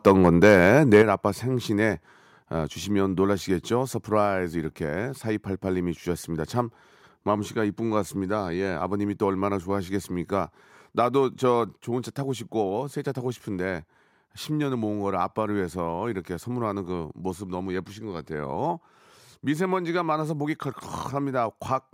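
A speech clip with microphone overload from 0.06 to 0.58 s and again from 0.94 to 1.02 s, where the loudest peaks crackle harshly with their tops flattened, likely from input gain driving the converter about 4 dB past its limit. The distortion sits only on the peaks, not across the whole level, and the second burst clips a larger share of the signal. Microphone volume stepped down at 1.02 s (about 6 dB) and at 11.79 s (about 3 dB), likely the call software cutting device gain. Unlike a speaker moving away or a fade, voice and background drop together in one instant, and the first drop follows the clipped burst directly.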